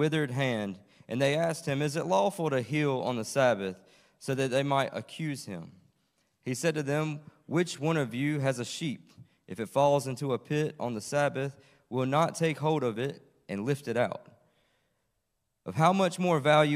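Nothing technically wrong can be heard in the sound at any point, with the signal holding steady and continuous throughout.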